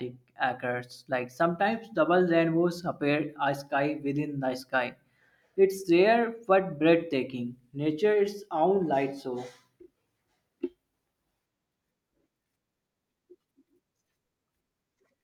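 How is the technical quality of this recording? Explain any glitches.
No glitches can be heard anywhere in this speech recording. There is nothing in its technical quality that needs explaining.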